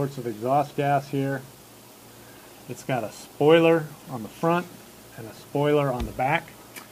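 No technical faults are audible anywhere in the clip.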